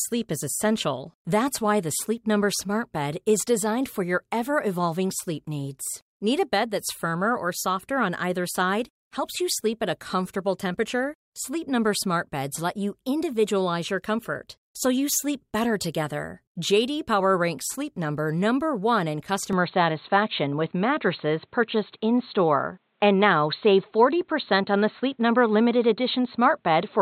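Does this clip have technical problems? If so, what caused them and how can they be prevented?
Yes. From 19.53 s to the end of the speech, the sound has what is likely an input switched to a poorer device. The audio turns dull and boxy at that point, with nothing above 4.3 kHz, as a narrowband microphone or headset call profile would pass. The level shifts by roughly 5 dB, and a new noise floor appears about 50 dB below the signal, with no silence at the switch. To prevent this, lock the recording input to a single device and disable automatic switching to headsets.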